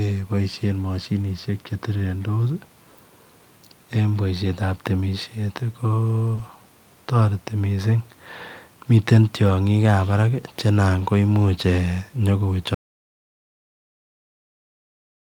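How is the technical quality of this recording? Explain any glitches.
The recording has three kinds of glitches: brief rough patches where lost data was rebuilt, one short concealed loss, and a dropout to silence that runs to the end of the clip.

Lost packet rebuilt from error correction, at 4.45 s, 6.37 to 6.39 s, and 10.99 to 11.05 s. The first two rebuilt stretches each last about 20 ms, which fits one missing packet each. The third lasts about 40 ms, which fits two packets. In each case the following packet carried a reduced-quality backup copy, and the decoder played that copy instead of leaving a hole. The speech continues without a gap, but it turns briefly grainier and noisier.

Short concealed packet loss, at 6.35 to 6.39 s. About 20 ms of speech never arrived in time, so the receiver improvised a fill by extending the preceding sound, repeating its pitch pattern if voiced or shaping noise if not, before blending back into real audio. 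The rebuilt stretch at 6.37 s overlaps the tail of this fill. The result is a quick smear or wobble, and a short consonant there may be swallowed.

Audio dropout to silence, from 12.75 s to the end. The speech cuts off mid-flow into digital silence, with no room tone or background left underneath, and it never returns. The likely cause is that the input was lost, through a disconnected device, a failed link or an accidental mute, while recording carried on writing silence. Whatever followed that point is missing from the file.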